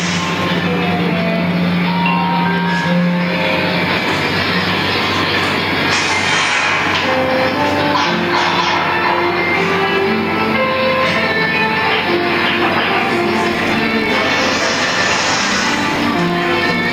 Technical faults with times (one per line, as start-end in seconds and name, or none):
0.00-16.93 gain pumping
13.53-16.93 filter restarted on every block